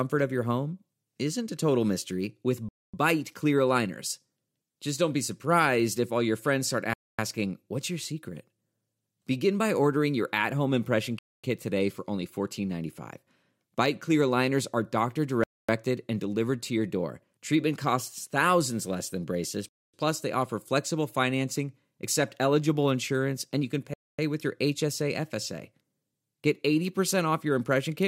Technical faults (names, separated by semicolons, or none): gap between chunks